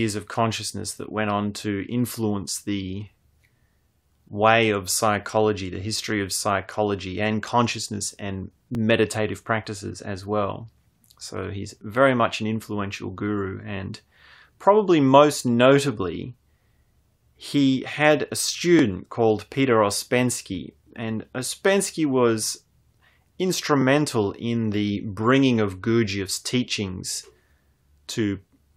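The clip is speech, with overlapping chunks. A short stutter is heard at 3.73–3.75 s, just before "way of psychology the". Others follow at 8.75–8.77 s, at 18.79–18.81 s after "he had a", and at 23.81–23.84 s before "in the bringing of". The stutters come at multiples of 5 seconds apart. The audio was handled in 5-second blocks, and each block began slightly before the previous one ended. About 21 ms of sound plays twice at every join.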